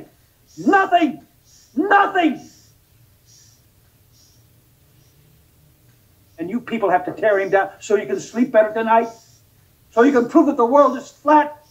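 No dropouts, clicks, distortion or other technical faults can be heard anywhere in the clip.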